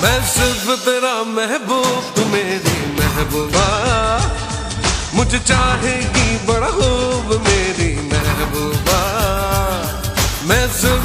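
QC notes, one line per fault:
3.41–8.31 s: digital radio blending to analogue. The receiver loses the digital stream and cross-fades over about 170 ms to the station's FM broadcast, then returns at 8.31 s. During the FM section a steady hiss sits roughly 30 dB under the programme. Level is matched, so the changeover is heard as noisier sound rather than a jump in loudness.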